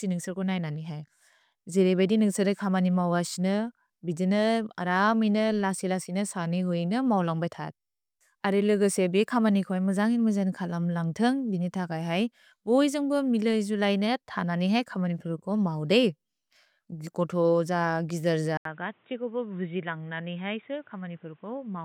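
Input switched to a poorer device at 18.57 s in this speech recording: after an 80 ms gap, the sound stays dull and boxy to the end, with nothing above 3.8 kHz, a level drop of about 5 dB and a new noise floor roughly 40 dB down, likely from a second microphone taking over.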